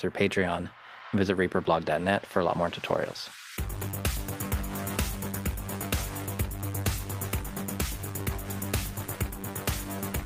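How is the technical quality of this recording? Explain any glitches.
No technical glitches can be heard anywhere in the recording, and the signal stays intact and continuous throughout.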